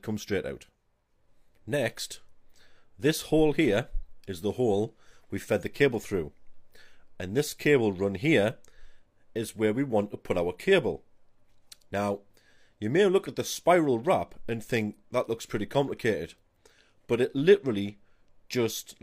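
No technical fault can be heard anywhere in the audio; the signal holds steady throughout, with no breaks, distortion or disturbances to point to.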